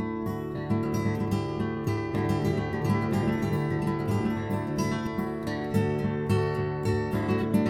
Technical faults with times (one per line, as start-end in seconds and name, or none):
2.15-5.07 doubled audio track